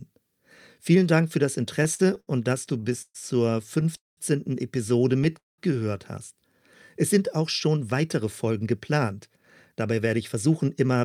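Repeated stalls (stutter) occur at 1.83 to 2.29 s, just after "für das", and again at 2.69 to 3.16 s. The jitter buffer kept running dry because packets arrived late or too slowly. The receiver bridged each gap by stretching the last sound, four gaps totalling 138 ms in the first span and five totalling 172 ms in the second, the longest 127 ms. About a third of each span is filled-in sound, so the audio drags and hiccups while nothing is actually lost.

A call audio freeze follows at 3.96 to 4.19 s, and another at 5.38 to 5.60 s. Each inserts roughly 0.2 s of held sound: a brief continuation of the last sound that fades into about 170 ms of silence before the audio resumes exactly where it stopped. The likely cause is packets held up in transit, emptying the buffer and pushing the playback delay out by about 0.2 s each time.

A jitter buffer speed-up runs from 7.67 to 10.96 s, starting after "sind auch". 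With too much audio queued after those delays, the receiver trimmed short pitch-period slices over and over, shedding around 0.3 s in total. Speech plays at 108% speed with unchanged pitch, so this stretch sounds noticeably hurried.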